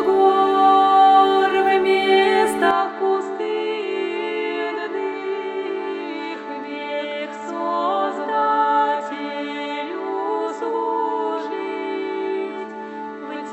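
At 2.71 s the sound abruptly turns duller and a few decibels quieter, with nothing above 7.8 kHz and a faint new noise floor, likely an input switched to a poorer device. Unlike a plain filter change, band, level and noise all shift together, without a gap.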